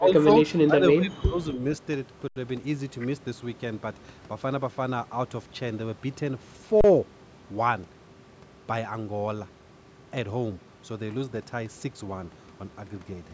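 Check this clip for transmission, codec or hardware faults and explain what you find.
Two kinds of fault are present: level drops at the start and two brief output-buffer underruns.

Speech suppressed in double talk: from 0.0 to 0.29 s and 0.65 to 1.59 s the speech dips by about 15 dB and then about 20 dB. The likely cause is an echo canceller attenuating the near talker during simultaneous speech.

Underrun with held sample: at 2.28 to 2.36 s (80 ms) and 6.81 to 6.84 s (about 32 ms), the output holds its last value. The sound stops, then resumes where it left off with little or no click.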